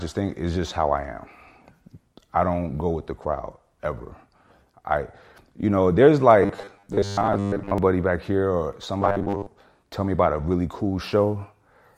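At 6.43 s, right after "I you know there's", the speech collapses into robotic sound from repeated short buffers until 7.78 s, just before "back here or". A second burst runs from 9.01 to 9.46 s, ending before "tell me about a". Both times a rigid 100 Hz metallic buzz is imposed on the speech. That rate fits a roughly 10 ms slice being replayed over and over, likely because audio was arriving too slowly, so most of the real signal in those stretches is skipped.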